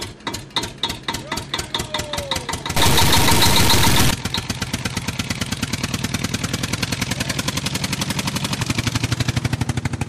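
From 2.77 to 4.11 s, harsh, buzzy distortion and noise in quiet moments suggest a stuck bit, likely a high one worth about -10 dBFS.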